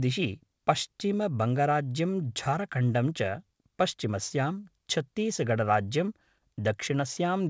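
No faults are audible in the speech, which has come through a wideband call path with nothing above 8 kHz, consistent with G.722 coding.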